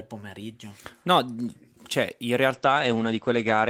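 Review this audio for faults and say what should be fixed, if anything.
Call bitrate drop at 2.54 s, just after "cioè in", lasting to the end of the clip. The speech suddenly turns coarse and muffled, with the top end cut from about 20 kHz to 8 kHz, which points to the encoder being pushed from roughly 32 kbps to about 13 kbps. Preventing it means giving the call steadier headroom, such as a less congested link or a higher minimum bitrate floor for the encoder.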